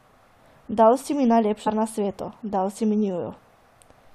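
At 1.66 s, damaged data in the compressed stream corrupts a frame; the decoder loses sync and resynchronises, producing a brief glitch in the speech.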